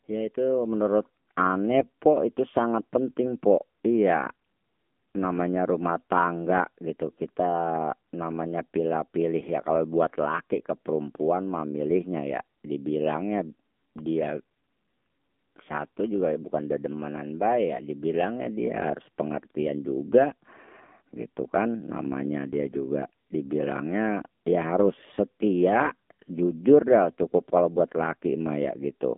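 Throughout the recording the speech runs through the AMR narrowband mobile codec at 7.4 kbps, with the line band limited to roughly 200 Hz to 3.6 kHz. The codec samples at 8 kHz and rebuilds the voice from a vocal-tract model excited by sparse pulses in 20 ms frames. At this low rate the damage is plainly audible: the voice sounds thin, buzzy and synthetic, and nothing above 4 kHz survives.

From 1.72 to 1.85 s, AMR bit errors hit the stream. Bits flipped in the weakly protected part of the frames while the check on the critical bits still passed, so the decoder used corrupted data. The error density suggests a few percent of bits flipped across five frames. Excitation pulses fall in the wrong positions, and the fine pitch, gain and spectral values drift. The voice holds roughly the same pitch and loudness but turns hoarse, scratchy and gargly for that brief stretch.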